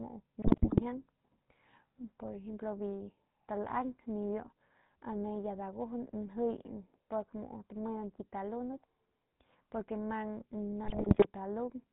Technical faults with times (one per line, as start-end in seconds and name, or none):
0.00-11.93 GSM full-rate codec
0.42-0.81 GSM bit errors
10.84-11.27 GSM bit errors